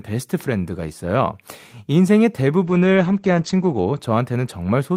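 From 2.66 to 4.05 s a call bitrate drop makes the speech rough and muffled, which points to the encoder falling from about 32 kbps to 11 kbps for roughly 1.2 s. On a spectrogram the energy above 8 kHz vanishes, then returns.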